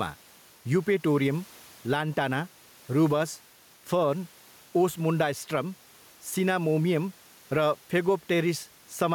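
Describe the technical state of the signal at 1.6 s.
Gain pumping is present at 1.6 s, as it is throughout the speech: the room noise, about 34 dB below the speech, swells in each pause and ducks by roughly 5 dB under louder syllables, likely from excessive gain feeding a fast limiter. The dip follows the speech level, with no hard cut to silence as a gate would give.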